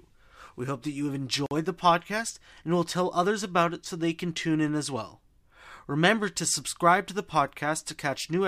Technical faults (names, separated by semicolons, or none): gap at a join of encoded pieces